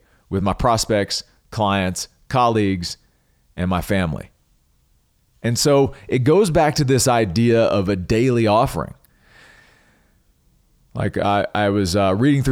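Nothing stood out on listening to the speech in this recording.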